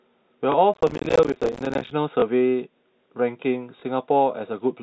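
A speech recording carried over a G.711 telephone path, whose 4 kHz ceiling shows as an empty band above that line on a spectrogram, has two kinds of fault. Packet loss with the last packet repeated occurs at 0.52 s, 2.2 s and 3.8 s. Each time, about 20 ms of sound, which fits a single lost packet, is replaced by a copy of the previous stretch. Each single repeat gives a small blip. On a waveform it looks like a repeated block with a step at its edges, and on a spectrogram a thin vertical line. Processor overload crackle runs from 0.74 s to 1.91 s. The processor keeps missing its deadlines for small buffers, about 7 ms each, and every miss drops to silence. That leaves dozens of hard-edged gaps that are heard as gritty tearing. The waveform shows many notches cutting to silence, and the spectrogram shows dense broadband vertical streaks across that span.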